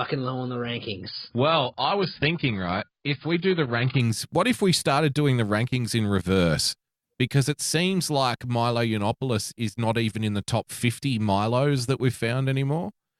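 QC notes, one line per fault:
0.00–4.00 s, adaptive stream starting at a low bitrate: the player opened on a lean rendition before measuring the connection, then switched up seamlessly just before "what if we started". Until then, nothing sounds above 5.1 kHz and codec artefacts are stronger, pointing to 16 kbit/s AAC stepping up to 96 kbit/s.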